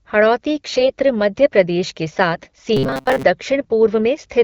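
From 0.64 to 0.92 s, just before "मध्य प्रदेश के", AMR bit errors at a modest rate make the sound hoarse and gargly. Pitch and level hold, which separates this from dropouts. A harsher burst at a higher error rate follows from 2.32 to 2.52 s, right after "मध्य प्रदेश के". From 2.77 to 3.23 s comes robotic sound, likely from repeated short buffers of about 7.5 ms. Unlike the bit errors, it is a rigid metallic buzz locked at 133 Hz, with most of the real audio replaced by repeats.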